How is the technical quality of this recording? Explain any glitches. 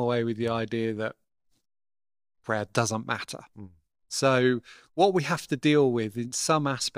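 One glitch stands out in the speech, at 5.61 s, just after "what we have to". There is a tiny jump where a few milliseconds of audio vanish. The likely cause is a dropped buffer (overrun): the software failed to collect samples before the hardware overwrote them, so the surrounding audio is spliced together with no gap and no silence.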